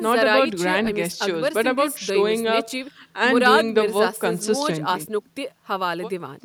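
No audible faults anywhere in the speech recording.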